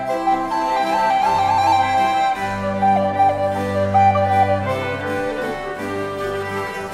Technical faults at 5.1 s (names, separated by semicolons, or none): none